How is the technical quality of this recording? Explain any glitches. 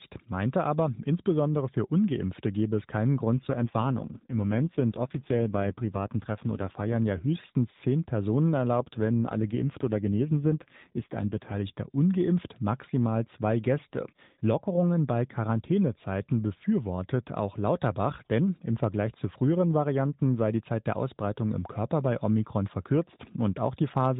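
The recording is narrowband mobile-call speech, band-limited below 4 kHz, and it has two stretches of AMR rate drop. From 3.32 to 6.97 s, after "gebe es keinen" and up to "ja höchstens zehn", the voice turns rougher and buzzier. It happens again from 8.80 to 11.55 s, ending at "ungeimpft maximal zwei". The band stays the same and there is no gap. The codec is spending fewer bits on the voice to protect against link errors, so its model of the speech gets coarser. The sound fits a drop from 12.2 to 5.9 kbps.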